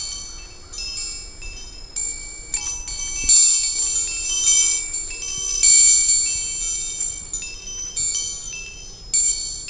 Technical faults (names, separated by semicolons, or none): none